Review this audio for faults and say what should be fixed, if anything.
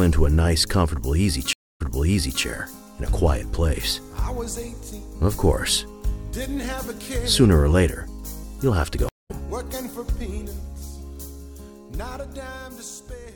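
The connection dropped twice and the player restarted its decoder mid-stream, a stream reconnect each time. At 1.53 to 2.43 s, a 216 ms silence is followed by audio resuming 679 ms earlier, repeating material. At 9.09 to 9.31 s, a 167 ms gap jumps roughly a fifth of a second ahead. Larger client buffering and resume-by-position on reconnect would prevent both the skips and the repeats.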